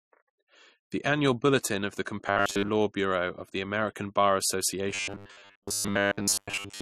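From start to end the speech carries mixed smearing and swirl, likely transcoding between lossy codecs; two codecs' artefacts overlap rather than one consistent character.

At 2.28 to 2.71 s and again from 4.90 s to the end, robotic sound from repeated short buffers sets in: a rigid 100 Hz metallic buzz, likely from a 10 ms chunk repeated in place of most of the audio. Unlike a deliberate pitch effect, that pitch never moves with intonation, though the speech's rough shape survives.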